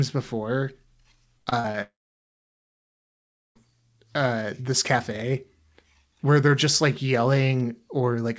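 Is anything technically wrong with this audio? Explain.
Yes, there are two faults, both early in the clip. From 1.38 to 1.76 s there is repeated packet loss with a robotic sound. Four short holes, the longest 78 ms, are each patched by stretching the preceding sound, so about 42% of that span is filler and it comes out choppy and robotic. Unlike a single dropout, real audio keeps returning between the holes.

From 1.82 to 3.57 s the sound smears into a brief fading buzz or hiss, then goes silent for about 1.6 s, and resumes at "uh this cafe" with the missing stretch simply gone. This is likely a long network dropout. Unlike the earlier choppiness, nothing gets through at all during the gap, and the audio doesn't pick up where it left off. Throughout, nothing is heard above 8 kHz, which fits a G.722 call codec at 64 kbps.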